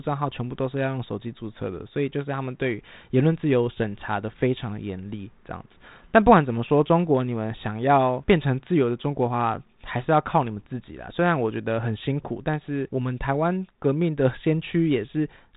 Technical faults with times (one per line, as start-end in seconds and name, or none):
none